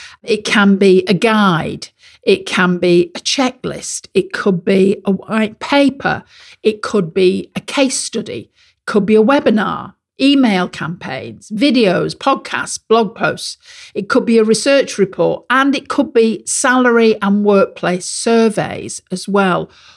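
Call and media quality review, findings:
No audible faults found.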